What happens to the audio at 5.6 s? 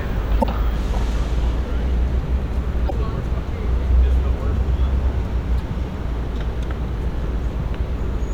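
A brief glitch cuts into the sound from 5.56 to 5.61 s, lasting about 50 ms, a blip that doesn't belong to the surrounding audio. It comes from damaged data in a compressed stream. A stretch of the encoded bytes there is corrupted, so the decoder misreads or rejects those frames, loses its place in the stream, and outputs garbled sound until it locks onto the next valid frame header.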